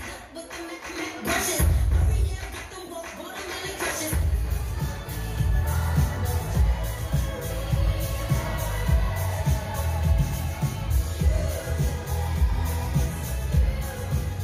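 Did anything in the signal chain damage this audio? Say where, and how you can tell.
No, no signal-chain damage heard.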